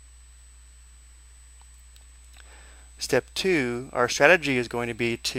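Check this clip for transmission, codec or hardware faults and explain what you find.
A steady USB whine runs through the whole clip. It sits at 8 kHz, which is also its strongest component. That pitch matches the bus's 125-microsecond microframes. Each microframe pulls a burst of current. The ripple leaks into the audio path through the power or ground. The result is a thin, high, fixed-pitch tone. It sits roughly 35 dB below the signal. It is faint.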